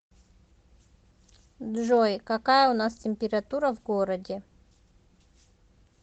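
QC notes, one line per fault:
No faults to log for this speech clip.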